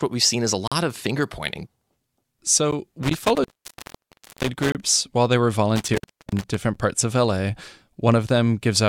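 At 0.68 s the time stamps of two adjoining stream segments fail to meet, leaving a gap between stream segments that the player pads with silence: a hard-edged hole of about 40 ms drops into the speech. The same seam recurs at 2.71 s (about 12 ms), 4.72 to 4.75 s (about 27 ms) and 6.75 s (about 9 ms), spaced two seconds apart in step with 2 s segments. The speech simply pauses and resumes with no audio lost.

From 3.03 to 4.85 s an intermittent contact, a loose cable or plug, breaks the line, holding it open for about 979 ms in all. The speech cuts out with crackle at each edge, with faint hiss left underneath. A second break from 5.76 to 6.54 s opens the line for about 349 ms, producing the same crackling dropouts over residual hiss.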